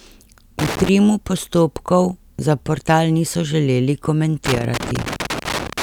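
From 0.59 to 0.89 s, just before "postopkov za", and again from 4.46 s to the end of the speech, loose connector crackle breaks in. A worn contact makes and breaks, chopping the signal into irregular scratchy bursts. The waveform shows jagged spikes and dropouts, the spectrogram scattered broadband vertical streaks.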